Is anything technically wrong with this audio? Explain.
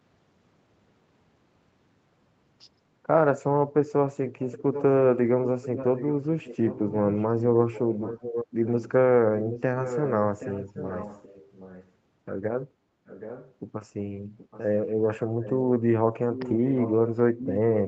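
Yes, there's an echo leak: at 4.4–4.83, 5.46–6.95, 7.42–8.91, 9.4–11.91, 13.06–13.54, 14.38–14.63, 15.42–15.58 and 16.33–17.79 s, a fainter copy of the speech trails it by about 0.77 s, usually roughly 10 to 15 dB down and very faint near 14.4 s. This is likely a far-end loudspeaker whose echo canceller let some of its own microphone pickup slip back into the call.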